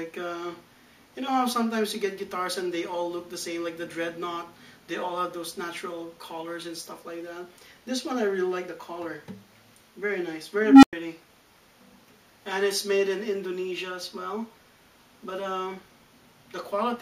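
At 10.63 s an unstable filter runs away: a tone of around 300 Hz swells over about 195 ms into a loud clipped squeal, then overflows and cuts to 100 ms of silence ending near 10.93 s. A spectrogram shows a brightening horizontal band; the waveform balloons, flattens, then goes blank.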